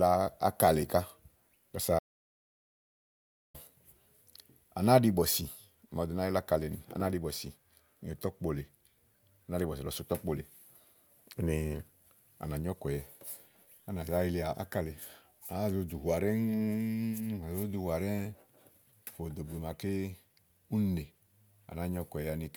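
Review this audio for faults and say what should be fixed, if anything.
An audio dropout to silence runs from 1.99 to 3.54 s in this speech, cutting about 1.55 s to silence with no room tone; the input was likely lost while recording continued. The waveform shows a dead-flat line and the spectrogram a blank gap. Secure connections and monitor input levels during capture.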